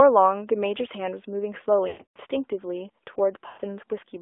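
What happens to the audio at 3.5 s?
From 3.48 to 3.62 s the speech hits a run of lost AMR speech frames. About 120 ms goes missing, which points to six consecutive 20 ms frames that failed their checks. The decoder fills the gap by repeating the last good pitch and vocal-tract settings at shrinking gain, so the sound stretches into a flat, droning hold that fades toward silence. On a waveform the envelope decays smoothly across the gap. A spectrogram shows frozen harmonics that dim before the speech resumes, briefly weaker.

That moment also carries the AMR narrowband mobile codec, present across the whole clip at what sounds like a 10.2 kbps mode. Everything is squeezed into a telephone band of roughly 300 Hz to 3.5 kHz, so the speech sounds thin and boxy, and its pulse-driven vocal-tract model leaves a plainly audible buzzy, synthetic edge. A spectrogram shows a hard ceiling with nothing above about 3.5 kHz and little energy below 300 Hz.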